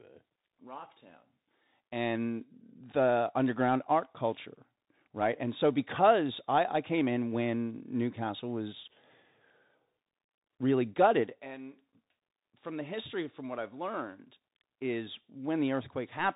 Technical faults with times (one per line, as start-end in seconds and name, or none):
0.00-16.35 Bluetooth CVSD headset codec